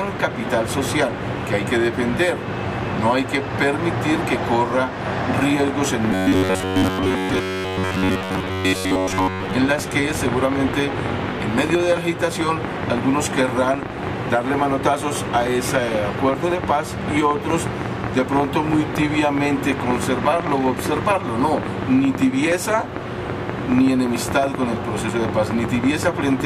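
A train of clicks runs from 5.38 s to 26.41 s, about 8 per second at an irregular pace, some 150 in all. They sit well above the audio, peaking around 15 dB over it, and tick through the pauses as well as the louder passages. Their similar shape and steady presence point to a likely cause in electrical interference from nearby equipment or a faulty connection or power supply injecting repeated pulses. Robotic sound from repeated short buffers appears from 6.12 s to 9.55 s, overlapping the clicks. The audio turns into a rigid, metallic buzz locked at 93.8 Hz. That pitch comes from the same short stretch of audio being replayed over and over, and its period fits a buffer of roughly 10.7 ms. Most of the real audio in that span is skipped and replaced by repeats, so the sound only loosely follows its original shape. The likely cause is new audio arriving too seldom, with the software looping its last buffer to fill the gaps.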